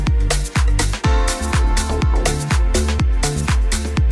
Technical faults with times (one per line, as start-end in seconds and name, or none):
none